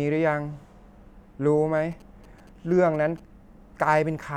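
From 1.77 to 3.20 s, GSM signalling bursts break through under the speech. A 2G phone is sending short radio bursts, and the audio circuit rectifies them. They sound like a galloping dit-dit-dit of brief 217 Hz buzzes, sitting well below the speech.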